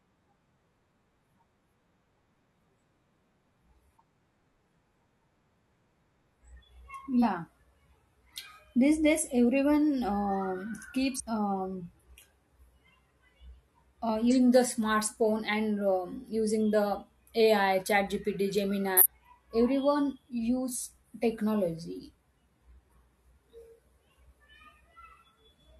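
Compressed frames are skipped in this speech at 4.16, 7.19, 11.16 (right after "days everyone um"), 14.27 and 18.97 s. Each time the audio jumps ahead by whole frames, about 43 ms each, losing anywhere from roughly a tenth of a second to almost half a second.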